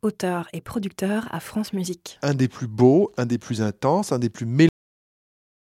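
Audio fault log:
4.69 to 5.66 s, cut-off end: right after "intenses un des plus" the speech stops mid-sound and falls straight into digital silence with no natural decay. The final stretch of audio buffers was never written out, so playback ends abruptly instead of finishing.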